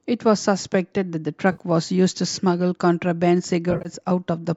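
AAC frame loss with concealment at 1.52 to 1.61 s, then scattered across 3.71 to 3.89 s. The decoder rebuilds missing frames from the last good spectrum, so the 60 ms gap, then about 110 ms in runs of up to roughly 50 ms, sounds smeared and noisy.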